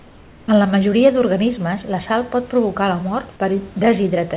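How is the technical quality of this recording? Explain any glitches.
There's one glitch, right at the start, on top of a telephone-band call path where the sound stops at 4 kHz, as you'd expect from a 64 kbps G.711 link.

From 0.0 to 0.48 s the background is comfort noise in place of the real room noise. That first half-second sounds like a smooth, featureless hiss, about 3 dB quieter than the room noise that follows, which sits about 28 dB below the speech. The likely cause is discontinuous transmission: the sender went quiet while no speech was detected, and the receiver filled the gap with synthetic noise roughly matched to the background until real audio arrived.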